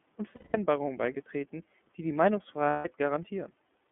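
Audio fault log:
throughout: iLBC codec. Speech is confined to about 200 Hz–3.4 kHz with a rough, synthetic grain, which fits iLBC's 13.33 kbps mode with 30 ms frames. The grain, not just the narrow band, separates it from plain telephone filtering.
0.36–0.57 s and 2.70–2.86 s: lost iLBC frames. For about 180 ms and 150 ms, the decoder fills each gap with a held, buzzy, breathy vowel. Unlike a silent dropout, the gap is filled, and the voice is right again almost at once afterwards.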